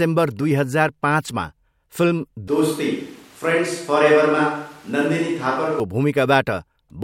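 From 2.48 s to 5.80 s the speech abruptly turns roomy and hollow, with thinner bass and a noise floor roughly 30 dB below the speech. The level barely changes. This is likely a switch to a distant microphone, where the close microphone's feed dropped out and a farther one took over. On a spectrogram the low end thins and reverberant tails smear between syllables. The waveform's gaps fill with noise, and both edges are hard cuts.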